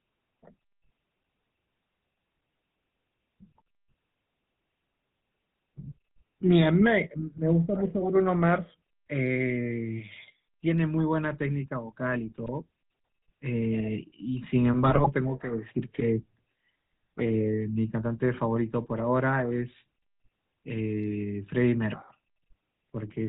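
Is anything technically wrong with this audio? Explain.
Yes. Throughout, the speech has a buzzy, gravelly roughness and nothing above 4 kHz, the plainly audible signature of the GSM full-rate codec, which fits its 13 kbps rate. The codec models the vocal tract and drives it with a coarse, regularly spaced pulse excitation.

Twice the sound breaks into squawks and gargling pops: briefly from 12.43 to 12.50 s, then longer from 14.83 to 15.09 s. These are GSM bit errors. At an error rate of about 2%, corrupted filter, pitch or gain values distort the spectrum and level of each affected frame.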